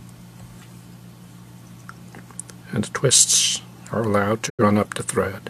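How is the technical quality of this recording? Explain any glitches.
One fault is audible: a digital broadcast dropout near the end, from 4.48 to 4.63 s. The receiver stopped getting decodable frames, either through signal loss or failed checksums, and muted its output until valid frames resumed. The sound fades to silence over about 20 ms and stays silent for roughly 85 ms, which fits two lost frames, before returning. Whatever was transmitted during that gap is gone rather than concealed.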